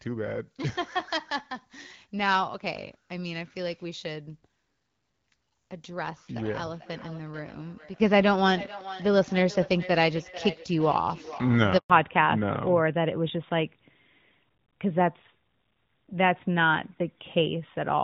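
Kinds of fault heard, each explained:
Feedback echo between two devices: A second device in the same room was playing this call aloud, and its sound reached the first device's microphone, where that device's echo canceller could not remove it because it only cancels its own playback. From 6.2 to 11.65 s the speech returns roughly every 400 ms, thinner and more ringing each pass, peaking at about 15 dB below the direct speech.
Handover gap: The call was switched from one network to another, and no speech frames came through while the link changed over. At 11.78 s the sound fades out within a few tens of milliseconds and stays silent for 120 ms, until 11.9 s, when the new connection starts delivering audio. Whatever was said inside that window is simply gone.
Fallback to narrowband: Right after the handover the call dropped from HD Voice, which sounds clear here at 12.65 kbit/s, to the older narrowband AMR codec at 12.2 kbit/s. 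From 11.9 s to the end nothing above 4 kHz remains, so the upper brightness and crisp consonant detail disappear and the speech sounds duller, boxier and rougher than before.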